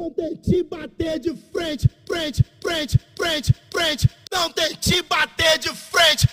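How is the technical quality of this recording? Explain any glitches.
Listening through the recording, nothing stood out as a technical problem, and there are no glitches to explain.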